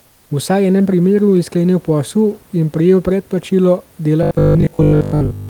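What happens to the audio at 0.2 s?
Comfort noise replaces the background from 0.07 to 0.29 s, likely from discontinuous transmission: the room noise becomes steady, featureless hiss about 5 dB quieter, not the dead silence of a dropout.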